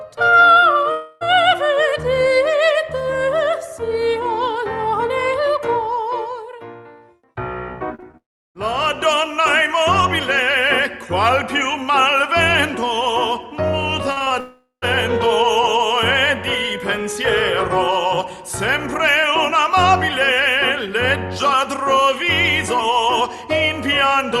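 From 0.91 to 1.23 s there is a long network dropout: for about 0.3 s the last sound is stretched into a fading buzz. The likely cause is a run of audio that never arrived, so the receiver kept extending what it last had. Unlike a brief concealed loss, the hole is long enough for the fill to decay audibly, and the sound resumes further on with the missing stretch gone.

Around 8 s, short concealed packet losses appear at 7.95 to 8.00 s, 8.00 to 8.04 s, and 8.12 to 8.15 s. Each hole lasts only a few hundredths of a second and is patched by continuing the previous sound and then blending back. They come across as quick smears or wobbles rather than gaps, which separates them from the dropouts around them.

Straight after, from 8.17 to 8.57 s, a second long dropout runs about 0.38 s. Here the fill dies away fast and most of the stretch, about 0.34 s, is plain silence before the audio returns.

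From 14.13 to 14.32 s, repeated packet loss gives a choppy, robotic texture. Four holes, the longest 36 ms, land so close together that roughly half of that span is concealment. No single hole is long, but their rapid recurrence keeps the sound fractured. That pattern sets it apart from the isolated losses near 8 s.

It leads directly into a third long dropout from 14.40 to 14.84 s, about 0.42 s, with a fading fill ending in around 0.13 s of silence.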